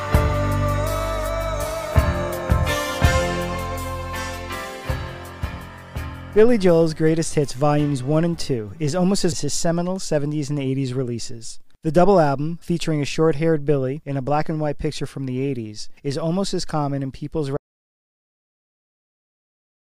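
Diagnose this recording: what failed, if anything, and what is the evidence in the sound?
At 17.57 s the sound cuts off abruptly and stays at digital silence through to the end of the clip, with no room tone or noise floor left underneath. That total absence is the signature of an audio dropout to silence: the input was most likely lost at the capture stage, through a disconnected device, a failed link or an accidental mute, while the recorder kept writing silence, so whatever followed is gone.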